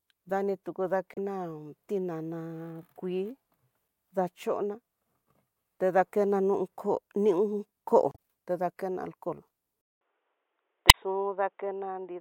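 Right at 1.14 to 1.18 s there's a quick squawky blip, and another at 3.85 to 3.88 s. That's damaged data in the compressed stream: a stretch of bytes came through wrong, so the decoder choked on those frames, lost sync and hunted for the next header. You get that chirp. The longest one is 8.11 to 8.19 s, right before "ta dakena alcohol".

Then at 9.81 s, after "ta dakena alcohol", there's roughly 200 ms of silence and the speech comes back dull and boxy, with nothing above 3.8 kHz, a bit quieter (around 5 dB down) and with a faint new noise floor well below the voice. That's most likely the input switched to a poorer device, say a headset call profile, and it stays that way to the end. One more corruption blip lands inside that stretch at 10.87 to 10.93 s.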